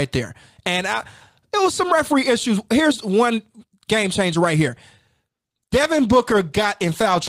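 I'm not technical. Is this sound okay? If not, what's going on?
No. From 5.3 s to the end, a call bitrate drop squeezes the speech into far less data, so it sounds rough, watery or muffled. Unlike a dropout, it never goes silent, and it doesn't recover.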